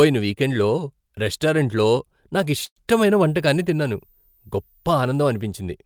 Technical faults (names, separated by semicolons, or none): call audio freeze; switching supply whistle